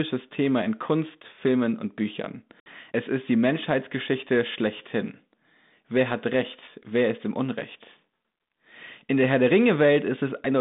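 At 2.6 s, packet loss on the ADPCM call leaves a 60 ms flat, hard-edged gap, a blank vertical stripe on a spectrogram. Speech returns with brief, slight distortion until the decoder's predictor resynchronises, by 2.70 s.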